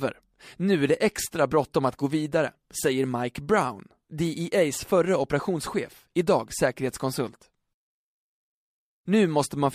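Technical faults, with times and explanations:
No technical faults are audible in this speech recording.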